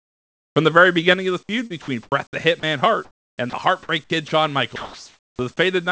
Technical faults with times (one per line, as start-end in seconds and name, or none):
0.00-0.56 comfort noise in place of the background
1.14 microphone volume stepped down
1.67-2.12 sound chopped by the voice detector
2.60-2.63 sound dropped by the voice detector
3.05-3.53 comfort noise in place of the background
3.50-3.53 sound dropped by the voice detector
3.83-4.31 sound chopped by the voice detector
4.76-5.39 sound dropped by the voice detector